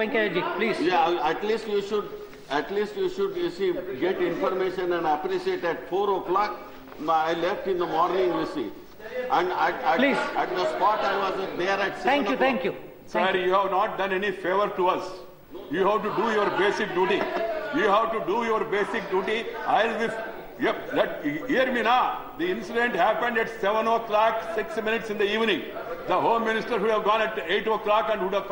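Nothing technical goes wrong anywhere in this audio, so there's no fault to point at and nothing to time.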